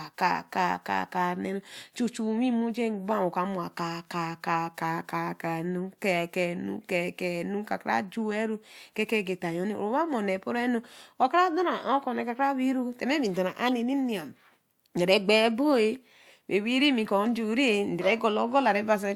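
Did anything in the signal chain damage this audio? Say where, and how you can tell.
Yes, it's the codec: two corrupt frames got decoded and played. There's a faint blip at 1.61 to 1.64 s and a much louder squeak at 13.66 to 13.69 s. Each lasts about one frame, where damaged bits put energy at the wrong frequencies.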